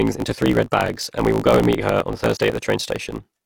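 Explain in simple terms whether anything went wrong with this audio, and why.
Something went wrong: a block size mismatch (truncated). From start to finish, the speech carries a low buzz near 54 Hz and runs about 1.16 times too fast, which fits blocks of around 1024 samples losing their ends. Unlike a simple speed-up, the pitch stays roughly normal.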